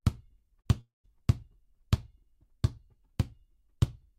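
A long network dropout, likely, stopped audio arriving from 0.81 to 1.06 s; concealment buzzes or hisses then fades to silence, and about 240 ms never returns.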